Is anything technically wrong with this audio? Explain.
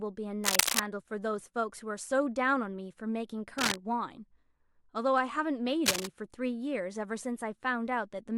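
Yes. Cable scratch noise occurs at 0.44–0.80 s, 3.58–3.76 s and 5.86–6.06 s. Each is a dense, uneven scratching burst about as loud as, or slightly louder than, the speech. It is likely caused by a worn connector whose contact resistance jumps as it moves. Unlike isolated clicks, each burst rustles continuously for a fraction of a second.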